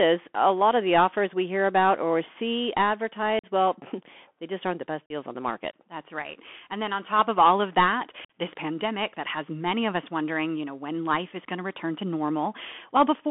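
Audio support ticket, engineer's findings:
Bluetooth CVSD headset codec, whole clip. Speech squeezed into roughly 250 Hz to 3.4 kHz, scratchy s sounds, grainy hiss under everything. Sounds like a 64 kbps CVSD link: one-bit up/down steps can't keep up with loud, bright sounds, so they distort.

Unconcealed Bluetooth headset packet loss at 3.39, 5.06 (between "just aren't the best" and "on the market") and 8.25 s (between "of all of that" and "this pandemic that has"). Abrupt holes of about 41 to 49 ms each, with hard edges and a dip in level right after. Points to ten-ish, then around fifteen, dropped headset packets filled with silence.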